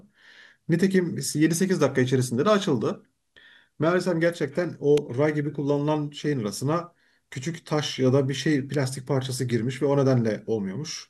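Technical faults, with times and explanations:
4.97 s and 8.74 s, electrical switching spike: a short arc from a nearby switch, motor or static discharge was likely picked up by the audio line, injecting a burst of electrical energy that has nothing to do with the speech. Each event lasts only a few milliseconds, so it is heard as a sharp snap sitting on top of the talking, the first peaking around -10 dBFS and the second somewhat quieter at around -15 dBFS.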